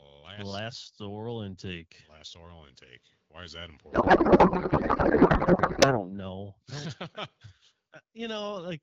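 From 3.91 to 6.09 s, a codec payload misread turns the speech into garbled noise and warble that barely tracks it. This points to octet-aligned AMR frames being unpacked as bandwidth-efficient. A spectrogram shows harmonics replaced by smeared, noise-like energy, and the waveform envelope stops following syllables.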